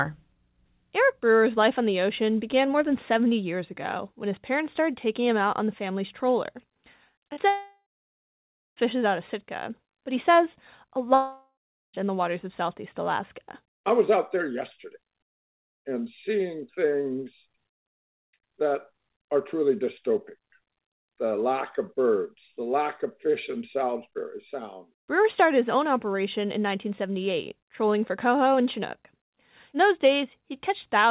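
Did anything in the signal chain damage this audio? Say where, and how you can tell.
Yes, the damage sits at the network stage of a call. The short concealed packet loss comes first: two brief smears at 7.28 to 7.31 s and 7.33 to 7.39 s, each a few hundredths of a second. The decoder bridged each gap by extending the preceding sound and blending back in. Unlike a dropout, neither gap reaches silence. Each is only a momentary wobble inside otherwise continuous sound.

Two long network dropouts follow, with lost packets the likely cause. From 7.49 to 8.78 s the last sound drags on as a fading buzz or hiss, then roughly 0.9 s of silence. From 11.14 to 12.01 s the same happens, with about 0.4 s of silence. What separates these from a deliberate mute or edit is the decaying synthetic tail before the hush, and the way the audio resumes further on with that span simply gone. The band stops at 4 kHz, which fits a narrowband 64 kbps G.711 mu-law call path.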